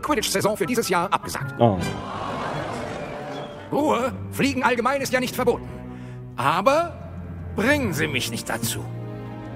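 Time-stretched section, 0.0 to 5.68 s: the audio runs 1.94 times fast at unchanged pitch, likely software dropping short pieces, leaving it rushed.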